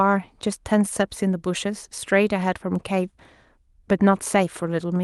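No technical faults are audible in the speech, which carries the ordinary character of an Opus call path, with its upper frequencies ending at about 12 kHz, consistent with a bitrate near 32 kbps.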